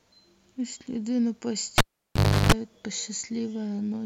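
At 1.78 s the speech cuts out with a sharp pop as the cable is pulled and plugged in while the line is live. For about 0.69 s the signal drops to near silence, and within that gap a 50 Hz mains buzz rises for roughly 0.34 s as only the plug tip makes contact, picking up hum without a proper ground. A second pop marks full reconnection, and the speech returns at 2.52 s.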